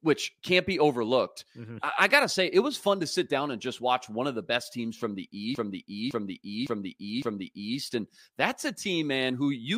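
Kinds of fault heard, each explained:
Repeated frames: a run of compressed frames was sent more than once, so the decoder plays the same 0.56 s of speech four extra times between 5.55 s and 7.78 s. It is heard as a looping stutter, and the audio grows by about 2.23 s.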